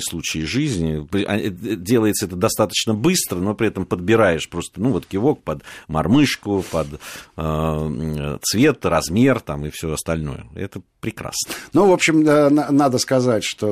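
No technical faults can be heard anywhere in this speech recording. Nothing breaks into the sound at any point, so there are no times or values to report.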